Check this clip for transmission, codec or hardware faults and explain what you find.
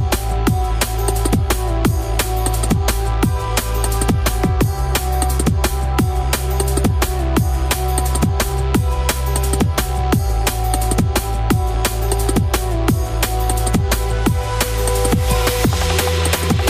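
No faults found anywhere in the audio; nothing to report.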